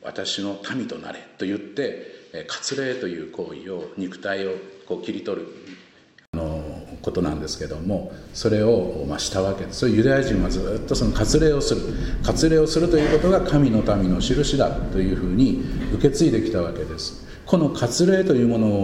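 For the first 6.34 s the input was likely switched to a poorer device: sound is quieter, dull above 7.9 kHz, faintly noisy, then 80 ms of silence.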